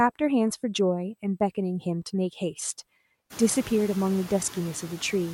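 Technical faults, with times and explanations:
Throughout: USB whine. The bus's 125-microsecond microframe current leaks into the audio through the power or ground, so a fixed whine sits at 8 kHz with its strongest part at the 16 kHz multiple, roughly 40 dB below the speech.
Throughout: noise suppressor artifacts. The suppressor treats the steady background as noise and pulls those bands down by about 14 dB frame by frame, so the room noise drops away between words and comes back up under them.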